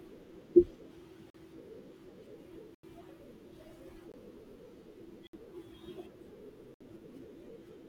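A speech recording in which the audio program likely repeatedly failed to fill its output buffer in time, so four blocks of samples went out as zeros. These blocks of digital silence fall at 1.30 to 1.34 s (about 43 ms, which fits a 2048-sample buffer), 4.12 to 4.14 s (about 21 ms, which fits a 1024-sample buffer), 5.27 to 5.33 s and 6.74 to 6.81 s (64 ms each). Each cuts straight to dead silence with no fade. All of them sound like brief holes in the speech. Separately, at 2.75 to 2.83 s an 88 ms silence is likely a Bluetooth stall, where held-up packets let the headphones' buffer run dry. Playback halts abruptly and then resumes.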